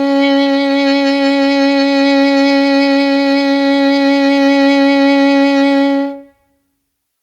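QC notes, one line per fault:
The music signal holds steady, with nothing in it pointing to a technical fault.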